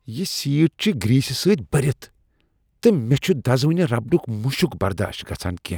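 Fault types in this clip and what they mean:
Clock drift buffer slips: Two devices likely running on separate clocks that disagree by around 100 parts per million let the buffer between them drift until a handful of samples are dropped or repeated, heard as a regular click about every 1.45 s, roughly four times between 1.20 and 5.53 s.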